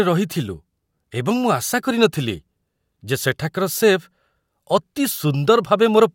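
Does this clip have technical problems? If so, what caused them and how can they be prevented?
No, there are no technical faults in this recording. Nothing in it calls for a fix or a preventive step.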